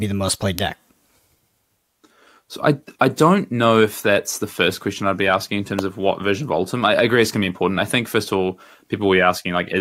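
Speech clip with two electrical switching spikes: a sharp snap at 0.59 s after "the most played", and a slightly quieter one at 5.79 s between "I'd be asking in" and "of what version". Unlike a dropout click, the speech continues unbroken beneath each snap, likely from nearby switch arcing.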